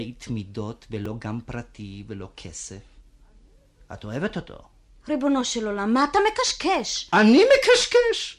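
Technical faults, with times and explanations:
1.05 s and 4.30 s, repeated buffer: fresh audio failed to reach the output in time, so the device replayed its last block twice more rather than wait. Each block is about 2.67 ms long, which fits a 128-sample buffer, so the same tiny slice of speech sounds three times in a row with a hard edge at each join. At that size the repeats blur into a brief click or buzz rather than an audible stutter, and next to no audio is lost.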